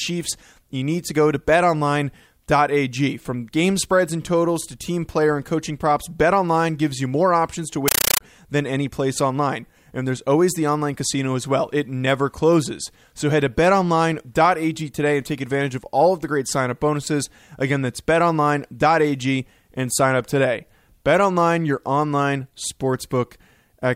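From 7.88 to 8.21 s, between "you more options to" and "than any place online", a compressed stream played as audio replaces the speech. Undecoded Dolby Digital data, likely AC-3, becomes very loud static. Unlike random noise, it chatters steadily at 31 bursts per second, each about 9.3 ms long and followed by silence.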